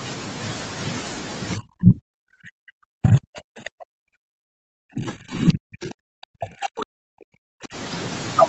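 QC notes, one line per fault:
1.56–7.75 s, speech suppressed in double talk: speech dips and breaks up, down about 40 dB at worst, likely an echo canceller mistaking it for echo.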